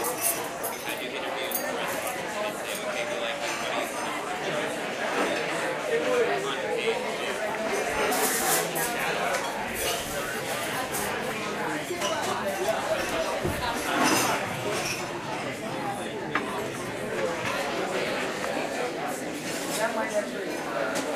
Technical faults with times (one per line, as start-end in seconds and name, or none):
none